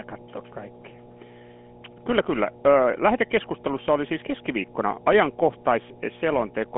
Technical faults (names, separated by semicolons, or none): mains hum; GSM full-rate codec